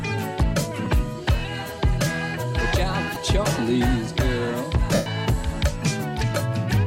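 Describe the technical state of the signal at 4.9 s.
Right at 4.94 to 5.06 s there's a burst of lost LE Audio frames, about 120 ms. The decoder repeats the last spectrum with scrambled signs, so it smears into noise and fades out.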